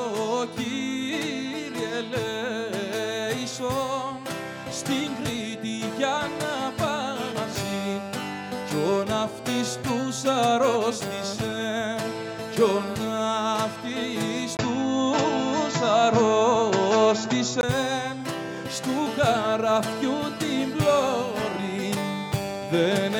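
An input switched to a poorer device from 14.57 to 17.63 s: after a 20 ms gap, the sound turns duller and boxier, with nothing above 7.6 kHz, a level shift of roughly 5 dB and new background noise about 30 dB down, likely from a change to another microphone or headset profile.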